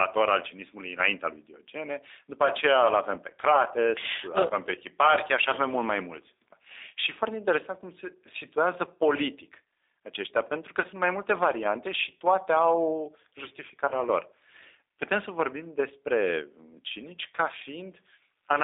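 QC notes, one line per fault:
throughout, G.729 codec: speech rebuilt at 8 kbit/s from a vocal tract filter, pitch and sparse pulses, so it sounds rough and synthetic, confined to 300 Hz to 3.7 kHz.
4.49–4.51, 8.86–8.89, 10.82–10.86, 13.88–13.94 s, VoIP packet loss concealed by the speech codec: the decoder extrapolates the last pitch and filter through each gap, giving a brief stretched smear that fades. Each gap fits one lost 10 ms frame; the 10.82 s gap fits two.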